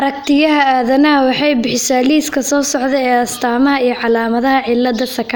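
No technical faults can be heard anywhere in this speech clip.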